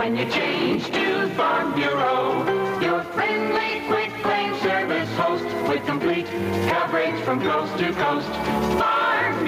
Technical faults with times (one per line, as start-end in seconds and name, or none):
0.00-9.47 gain pumping